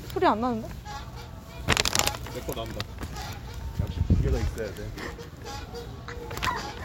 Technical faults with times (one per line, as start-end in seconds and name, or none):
none